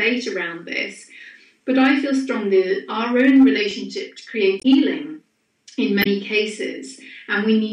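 Damaged data in a compressed stream shows up twice in this audio, from 4.59 to 4.65 s and from 6.00 to 6.07 s, each a glitch of about 70 ms heard as a short chirp or squawk cutting across the sound. At those points the coded bytes no longer match what the decoder expects. It misreads or rejects the affected frames, loses its lock on the frame structure, and emits garbled output until it finds the next valid frame header and resumes.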